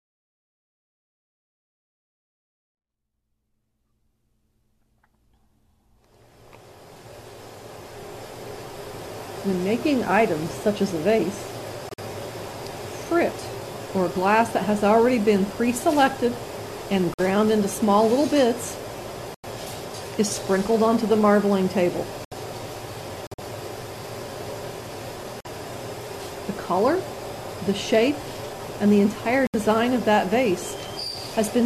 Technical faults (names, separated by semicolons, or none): corrupt frame muted